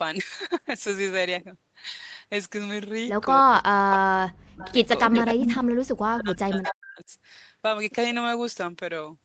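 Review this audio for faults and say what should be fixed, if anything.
Speech suppressed in double talk between 3.41 and 4.77 s and again from 5.08 to 7.11 s: the speech dips hard, by up to about 40 dB, likely because the echo canceller ducked everything while both sides talked.

Echo leak at 4.61 to 4.88, 5.04 to 5.22, 5.43 to 5.53 and 6.66 to 6.73 s: delayed copies of the speech, about 294 ms late, then 180 ms at the last one. They range from about 20 dB down to only about 5 dB below the speech, likely from the far end's loudspeaker echo getting past its canceller.

To prevent both, use a headset on the loudspeaker side, or tune the echo canceller so it tracks the echo path better and suppresses less aggressively during double talk.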